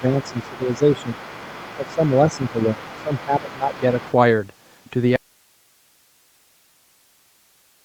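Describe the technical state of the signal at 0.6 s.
At 0.6 s, two things are going wrong at once. First, speech suppressed in double talk, from the start to 1.18 s: with both ends talking, the echo canceller likely could not tell the local talker apart from the loudspeaker echo, so it pulled everything down. The talker's speech dips by up to about 10 dB and thins out in patches, adding up to roughly 0.7 s of affected sound within that span.

Second, the other side's voice is leaking through from 0.21 s to 2.5 s. The far end's audio, played on the talker's loudspeaker, was likely not fully cancelled before reaching the microphone, so a second voice rides underneath at roughly 20 dB below the talker. At 0.6 s it overlaps the suppression dips, which makes the main speech sound both quieter and cluttered, all within the 8 kHz bandwidth of the Opus call path.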